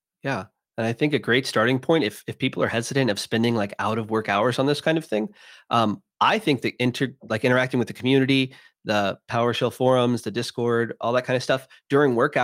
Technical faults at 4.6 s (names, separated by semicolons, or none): none